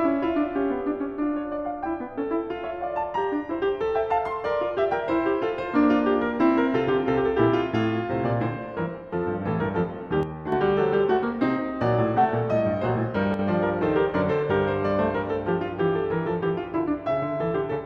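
At 10.23 to 10.52 s and 13.34 to 13.39 s the music abruptly falls about 6 dB, then snaps back, likely because one channel drops out, halving the shared signal in the mono sum. The waveform shows sharp-edged steps down, the spectrogram brief, even darkening across all frequencies.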